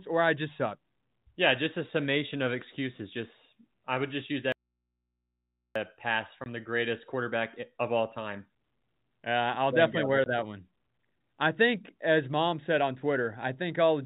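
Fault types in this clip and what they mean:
Audio dropout to a faint residue, 4.52 to 5.76 s: just after "I would just use", the speech cuts out abruptly for about 1.2 s. The gap is not silent but holds only mains hum, about 55 dB below the speech. The hard edges and the live hum fit the wanted signal being lost while everything after the break stayed connected, likely an interrupted input leaving an open, humming line until the signal returned.
Packet loss filled with silence, 6.44 s and 10.24 s: two holes of 20 ms each, the first just before "the greatest", the second between "I'll there definitely wear" and "that one". Each matches one lost packet that the receiver replaced with plain digital silence instead of concealing it, so the speech is chopped with hard edges. The narrow telephone band of the G.711 coding, capped at 4 kHz, sounds the same on either side of each hole.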